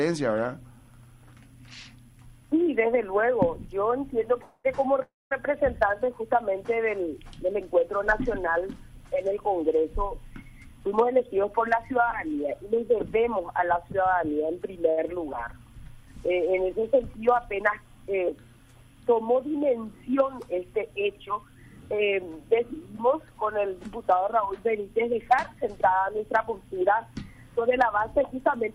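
The audio stops twice in a call audio freeze, at 4.41 to 4.66 s and at 5.02 to 5.33 s. Each time the last sound is carried on briefly, and the second pause falls to silence for about 0.19 s. Playback then resumes where it stopped. The likely cause is delayed packets draining the jitter buffer. A jitter buffer speed-up makes the audio run fast at unchanged pitch from 10.57 to 13.83 s, at 106% speed, with roughly 0.2 s trimmed. It happens again at 21.26 to 22.01 s, at 108%, and at 27.50 to 28.71 s, at 106%. Short pitch-period slices are cut to reduce the extra delay, so these stretches sound hurried. A short stall from a late packet holds a sound too long at 14.90 to 14.99 s. For 69 ms the receiver stretches the last sound until the packet arrives, which leaves a slight buzz or dip, and nothing is lost.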